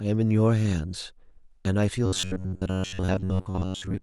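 Robotic sound from repeated short buffers runs from 2.06 s to the end at 4.02 s. The speech becomes a rigid metallic buzz near 93.8 Hz, likely from a starved stream repeating a segment of about 10.7 ms in place of most of the real audio.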